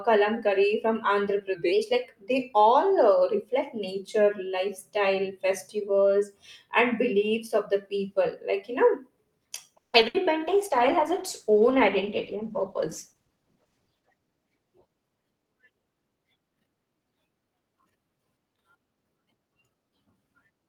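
At 9.77 s the speech stops for about 0.18 s: a brief continuation of the last sound, then roughly 150 ms of silence, after which it resumes exactly where it left off. This is a call audio freeze, likely caused by packets stalling in transit until the jitter buffer ran dry. Nothing is lost, but the gap adds about 160 ms of delay.

From 10.01 to 10.04 s there is a short concealed packet loss. About 40 ms of audio never arrived, and the receiver patched it by extending the preceding sound for around 10 ms before rejoining the real signal. It is heard as a quick smear, and the playout delay shrinks by a few tens of milliseconds.

Between 10.08 and 10.16 s a burst of packet loss follows. About 60 ms of consecutive audio is missing and is replaced by a 60 ms continuation of the last sound that fades as it goes, a held buzz or decaying hiss. The speech then picks up further along, with that stretch gone.

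From 10.49 to 16.89 s a call bitrate drop takes the encoder from 48 to 14 kbps, staying at the lowest rate for about 3.3 s. With so few bits the coding turns coarse and the top end is cut, so the speech sounds muffled and watery until the rate climbs back.

Within that stretch, from 13.21 to 14.28 s, a jitter buffer speed-up trims the backlog. The receiver removes short pitch-period-sized slices repeatedly, about 150 ms in total, so playback runs at roughly 115 % speed with unchanged pitch, and the speech sounds noticeably hurried.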